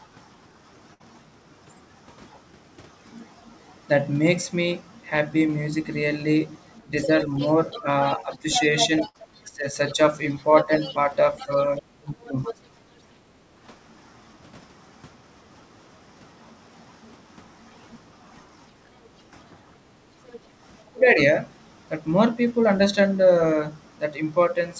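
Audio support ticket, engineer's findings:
Burst of packet loss at 0.94–1.02 s and 9.08–9.16 s. Each time about 60 ms of audio is gone. The receiver's concealment stretched the last sound for roughly 58 ms and faded it into a short buzz or hiss, then jumped ahead. Looks like consecutive packets dropped in the jitter buffer.

Speech suppressed in double talk at 6.84–8.47 s, with about 0.4 s of it dipped, as deep as about 15 dB. Likely the echo canceller couldn't tell the talker from the loudspeaker return, so it ducked both. Worst at 9.44–12.53 s, where about 1 s total gets pulled down as much as around 30 dB. Again at 20.91–21.18 s, roughly 0.2 s down about 20 dB.

Other side's voice leaking through from 6.99 to 12.54 s, sitting about 10 dB under the talker. Likely residual echo the canceller didn't remove. A short scrap at 20.33–20.38 s, much fainter, around 25 dB down. Same component, just a brief miss.

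Background gated by the echo canceller at 12.83–13.57 s. Room tone sags about 8 dB for roughly half a second while the far-end audio plays, then comes back when the canceller releases. Hard mic attenuation during playback. The band stops at 8 kHz, which fits a G.722 wideband path.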